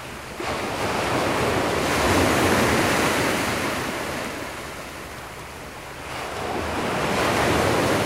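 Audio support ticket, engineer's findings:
Periodic USB or driver dropouts, 0.82 to 7.81 s, about one per second. Brief gaps of around 1 ms are skipped, not silenced, so they produce regular ticks through the sounds. Waveform shows small discontinuities; spectrogram shows evenly spaced thin vertical broadband lines. Probable cause: a recurring background task stalling the USB bus or audio driver.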